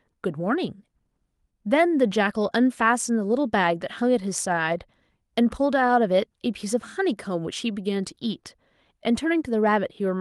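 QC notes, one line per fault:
No faults found in the speech; the call path is working as expected, and the top end stops near 12 kHz, which fits Opus at about 32 kbps.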